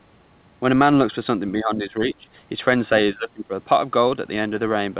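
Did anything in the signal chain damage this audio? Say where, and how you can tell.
Yes, in call processing. The speech dips from 1.58 to 2.27 s, by about 15 dB, and from 3.13 to 3.53 s, by about 20 dB. This is likely speech suppressed in double talk. The echo canceller mistook the talker for echo and turned it down.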